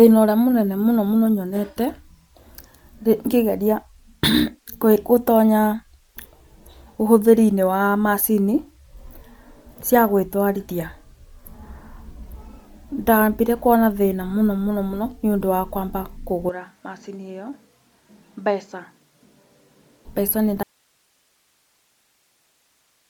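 Throughout the speech, a breathy, grainy edge and noise-filled upper bands, ending near 20.2 kHz with 10 ms frame texture on a spectrogram, likely come from Bluetooth LC3 compression at around 48 kbps.

From 16.49 to 20.05 s, ending just before "mbeca nĩ", the input likely switched to a poorer device. With no gap, the sound turns dull and about 10 dB quieter. The spectrogram cuts off at 7.6 kHz, with a new noise floor roughly 40 dB down.

From 20.63 s to the end, right after "mbeca nĩ", a likely audio dropout to a faint residue leaves only hiss about 45 dB below the signal. The waveform collapses to a thin, flat band.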